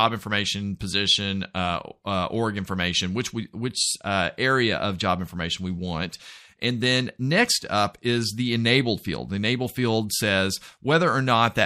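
The audio carries plainly audible MP3 compression artefacts for its full 11.7 seconds. The likely cause is lossy encoding at a low bitrate, which fits roughly 64 kbps. Short of bits, the encoder drops weak frequency lines that flicker on and off between frames. That gives a watery, swirling texture. Sharp attacks sound smeared rather than crisp.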